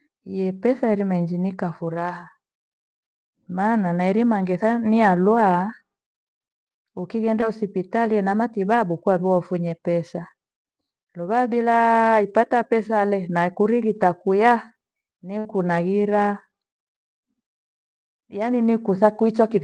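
Around 7.41 to 7.57 s there's a short concealed packet loss: about 20 ms of the speech didn't arrive in time, so the receiver extended the last sound for roughly 12 ms and blended back, leaving a quick smear or wobble, with the timing nudged later by about 10 ms.

At 15.39 to 15.47 s comes a burst of packet loss, where around 60 ms went missing in one go. The decoder stretched the preceding sound across the gap while fading it, so you get a brief held buzz or hiss before the speech picks up further along, with that stretch gone.

The call path's Opus coding, with its top end around 12 kHz, sits under all of it.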